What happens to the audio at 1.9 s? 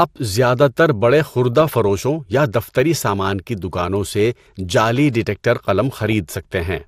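Bit errors slip past DAB error correction into the MP2 frames from 1.53 to 1.98 s, knocking single sub-bands out of level: DAB burbling, heard as short blips of noise over the speech. Beneath it, likely MP2 compression at a low bitrate (fitting about 80 kbps) leaves the whole clip dull and gurgling.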